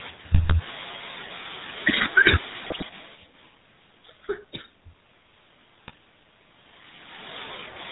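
The whole clip passes through the GSM full-rate codec, which fits its 13 kbps rate. It rebuilds speech from a vocal-tract model and sparse pulses and drops everything above 4 kHz, leaving a buzzy, gravelly roughness. GSM bit errors hit the decoder at 0.34 to 0.54 s, 2.64 to 2.84 s and 5.88 to 5.98 s. Corrupted filter, pitch and gain values distort each affected frame, so the speech breaks into squawks, pops and gargling.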